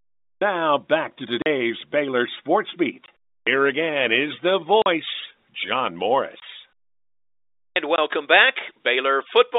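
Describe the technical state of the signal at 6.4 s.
At 6.40 to 6.42 s there is packet loss filled with silence: one 20 ms packet never arrived and the receiver substituted digital silence, cutting a short hole with hard edges into the speech. The waveform drops abruptly to a flat line; the spectrogram shows a narrow blank vertical strip.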